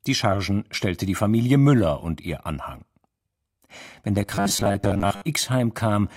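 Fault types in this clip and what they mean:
Robotic sound from repeated short buffers: 4.16 to 5.22 s, speech becomes a rigid 100 Hz metallic buzz, likely as about half the audio is skipped while a 10 ms buffer repeats.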